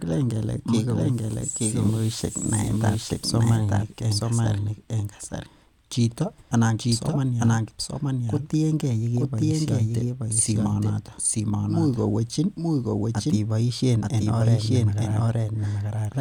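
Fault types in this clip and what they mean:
Doubled audio track: The speech is heard twice, with a second copy trailing the first by about a second. The copy is roughly as loud as the original and covers the full frequency range. It carries no decay or added room sound, so it is not an echo. It runs for the whole clip. The likely cause is a second capture path running late, or an edit holding two offset copies.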